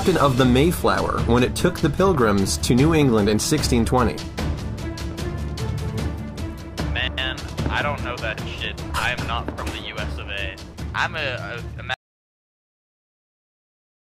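At 11.94 s the sound stops abruptly mid-flow and never returns: the final 2.15 s or so is dead digital silence, with no room tone or background hiss underneath. This is an audio dropout to silence. The likely cause is that the input feeding the recorder was lost, through a disconnected device, a broken link or an accidental mute, while the recorder kept writing silence through to the end of the file.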